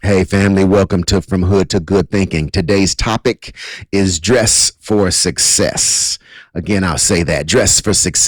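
From start to finish the speech is affected by hard clipping. The signal reaches some stage about 10 dB hotter than it can pass, so every peak that exceeds the ceiling is sheared flat, which here means around one sample in twenty. Those squared-off tops generate harmonics reaching well up the spectrum, heard as a gritty, harsh fuzz riding on each louder syllable rather than as isolated crackles.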